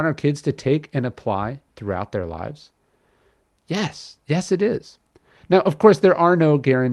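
No technical faults can be heard in this recording.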